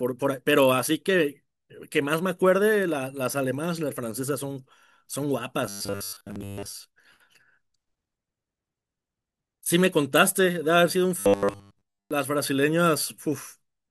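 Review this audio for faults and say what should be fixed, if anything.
Audio data likely arrived too seldom, so playback filled the gaps by replaying short chunks, producing a robotic sound from repeated short buffers. From 5.67 to 6.73 s and 11.20 to 12.11 s, most of the speech becomes a rigid, metallic 100 Hz buzz, which fits a 10 ms repeat. A larger jitter buffer or a steadier audio feed would prevent it.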